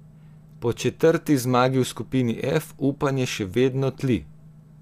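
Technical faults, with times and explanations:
Listening to the speech recording, nothing stood out as a technical fault at any point.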